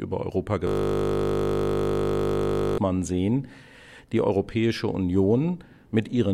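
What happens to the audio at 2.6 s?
At 2.6 s the audio is inside a system hang loop from 0.67 to 2.78 s: the system froze and replayed one 20 ms buffer, producing a steady 50 Hz buzz.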